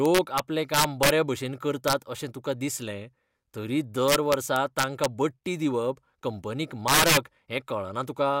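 Right from 0.06 s to 1.10 s the speech hits integer overflow: loud peaks push past the top of the integer range, about 6 dB over, and instead of being held at the limit they wrap round to the opposite sign. You hear harsh cracks, nastier than clipping. It comes back briefly at 1.88 to 1.93 s (about 2 dB over), again from 4.08 to 5.05 s (about 3 dB), and worst at 6.88 to 7.17 s, about 8 dB over.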